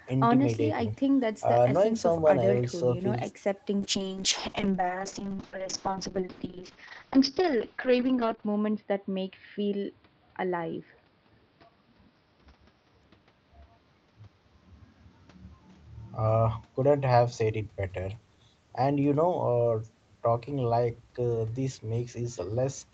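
From 3.81 s to 18.23 s the speech suffers a call bitrate drop. The connection's bandwidth estimate fell and the Opus encoder coarsened its coding, with the sound pointing to a slide from about 32 kbps to roughly 6 kbps. The speech turns rough and watery, worst for about 4.7 s at the bottom. On a spectrogram the top edge drops from 8 kHz to 6 kHz, and harmonics blur into smeared, blocky patches until the bitrate recovers.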